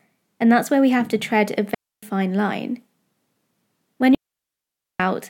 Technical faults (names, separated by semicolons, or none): digital wireless dropout